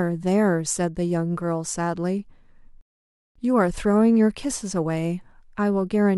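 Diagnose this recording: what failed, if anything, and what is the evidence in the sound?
A rebuffering stall at the playback stage breaks the speech from 2.81 to 3.36 s. The player ran out of downloaded audio and waited about 0.54 s for more. Unlike a dropout or packet loss, the speech resumes exactly where it stopped, losing nothing and only adding time.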